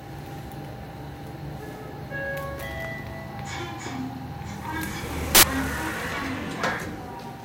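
At 5.35 to 5.43 s, samples built from the wrong bytes: each value is assembled with misordered or misaligned bytes, so low-order noise dominates. It bursts out as loud, harsh broadband noise, a dense waveform block and a solid broadband band across the spectrogram.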